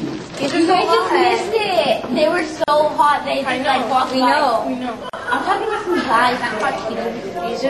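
A brief hole opens in the sound at 2.64 to 2.68 s (about 40 ms) and again at 5.10 to 5.13 s (about 38 ms), after which the sound resumes where it stopped. These are gaps at a join of encoded pieces, left by untrimmed encoder delay and final-frame padding.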